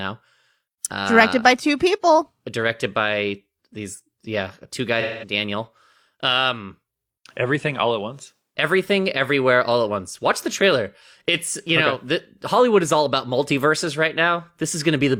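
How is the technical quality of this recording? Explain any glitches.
There's one glitch, from 5.00 to 5.32 s, right after "by these yeah two": AAC frame loss with concealment. Roughly 0.21 s of audio went missing, which fits about five lost frames, and the decoder patched it from the last good spectrum, so it comes out as a smeared, noisy or phasey patch.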